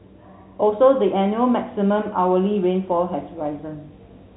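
From 2.92 s to the end at 4.36 s, a screen or video cable couples into the audio path, producing video or display buzz: a 50 Hz field-rate buzz with hash above it, plus a 15.6 kHz line-rate whine, sitting roughly 25 dB below the speech.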